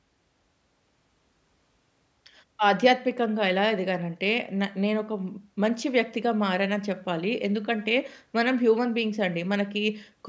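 No technical faults can be heard anywhere in the speech recording, with the signal holding steady throughout.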